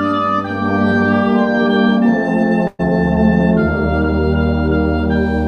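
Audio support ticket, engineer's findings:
Burst of packet loss, 2.67 to 2.81 s: last sound held and fading for about 115 ms, brief dropout, ~120 ms skipped. Jitter buffer concealment. Spectrogram: smeared decaying band, then abrupt discontinuity.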